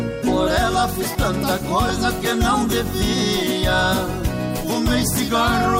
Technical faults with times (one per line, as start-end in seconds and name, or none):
1.89 lost LE Audio frames